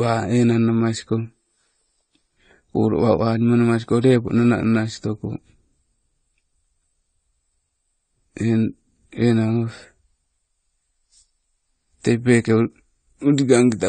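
A speech recording whose damage most likely comes from AAC compression at a low bitrate, around 32 kbps: the encoder discards everything above 9 kHz and coarsely quantises what remains, so throughout the sound is dull and smeared, with a plainly audible warbling, fizzy texture on sibilants and held sounds.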